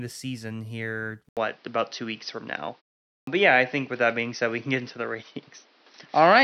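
Input switched to a poorer device, from 1.29 s to the end: after an 80 ms gap the speech turns duller, with nothing above 6.1 kHz, a level shift of roughly 5 dB and a new noise floor around 35 dB down, most likely a change to a narrower-band microphone.

Clipped start after a pause, at 3.10 s: following a 0.37 s pause, the output device is slow to wake, so about 0.17 s is swallowed and the speech bursts in without its opening sounds.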